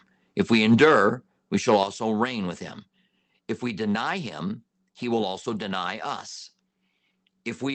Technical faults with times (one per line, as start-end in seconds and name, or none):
1.69-1.76 microphone overload
1.83 microphone volume stepped down